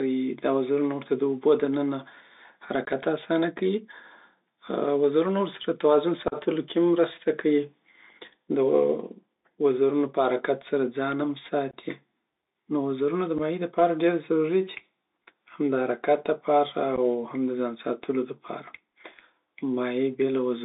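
Speech sounds narrow, gritty and boxed-in throughout, with scratchy s sounds and a grainy hiss underneath, the mark of the Bluetooth CVSD headset codec confining everything to about 300 Hz–3.7 kHz. Abrupt holes punch through at 2.85, 6.28, 11.71, 13.38 and 16.96 s, lasting 22.5, 37.5, 22.5, 7.5 and 15 ms. This is unconcealed Bluetooth headset packet loss, where a few dropped voice packets were replaced by silence or an idle pattern.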